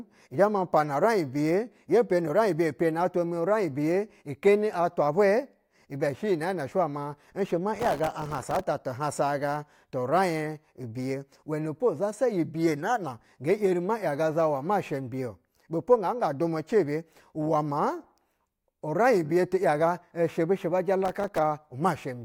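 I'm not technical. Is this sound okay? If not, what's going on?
No. The speech breaks into a gritty, tearing crackle from 7.75 to 8.67 s, and again briefly from 21.05 to 21.38 s. This is processor overload crackle: the computer fell behind, and dozens of tiny slices of sound came out as silence.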